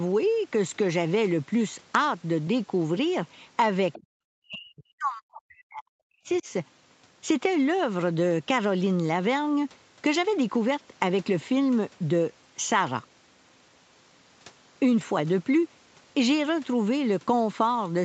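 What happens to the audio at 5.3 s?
At 5.3 s the speech sits inside a stretch of speech suppressed in double talk, running from 4.39 to 6.47 s. The level sinks sharply, by around 40 dB at its deepest, so the talker is turned down for roughly two seconds before recovering. The likely cause is an echo canceller facing simultaneous talk from both ends: unable to tell the near talker from loudspeaker echo, it attenuated everything together.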